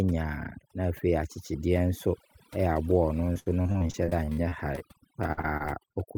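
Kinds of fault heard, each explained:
overdone noise removal: Throughout the speech, a noise reducer set too hard pushes individual frequency bands down whenever they sit near its noise estimate, taking quiet speech detail with them. The background drops and breaks up into twinkling specks.
repeated packet loss (robotic sound): From 3.33 to 4.82 s and again from 5.27 to 5.95 s, audio keeps dropping out in short holes, the longest about 64 ms. Each hole is patched by extending the previous sound, giving a choppy quality with pieces missing.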